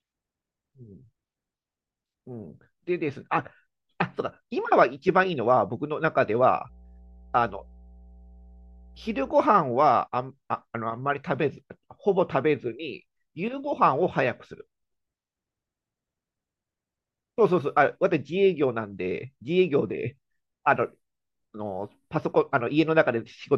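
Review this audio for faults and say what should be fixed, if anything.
Mains hum sits under the speech from 6.66 to 9.34 s. It is a steady 60 Hz tone, roughly 25 dB below the speech. A ground loop or nearby transformer is leaking power-line current into the signal path. Fix it with balanced cabling, a single ground point and distance from power supplies.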